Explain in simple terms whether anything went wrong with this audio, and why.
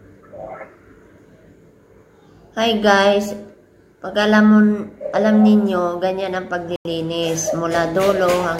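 Corrupt frame muted, from 6.74 to 6.85 s: the sound suddenly drops into silence for about a tenth of a second. Some compressed chunks of data, which fits about three frames, were damaged and rejected by the decoder. The player filled that gap with silence, so the timing stays intact.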